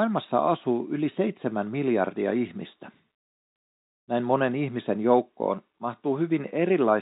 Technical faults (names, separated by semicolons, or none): none